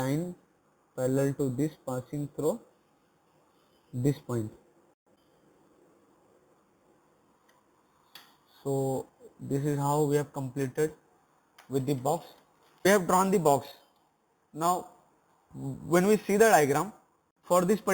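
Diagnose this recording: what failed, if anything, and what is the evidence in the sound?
A bright metallic fizz at about -17 dB tracks the sound throughout: imaging from sample-and-hold upsampling at the rate-conversion stage, 8 kHz to 44.1 kHz, unfiltered, mirroring the spectrum into 4 to 8 kHz.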